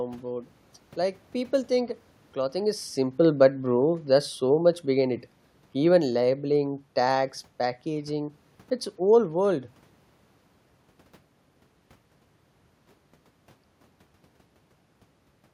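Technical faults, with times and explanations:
2.55–5.19 s, automatic gain falling: the gain control judged the input too loud or its background too strong and eased its gain down about 3 dB, so speech and background sink together.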